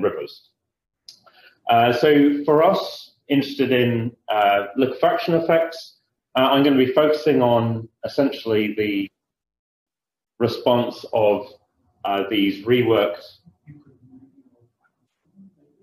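No technical fault can be heard anywhere in the audio, with the signal holding steady and intact for its whole duration.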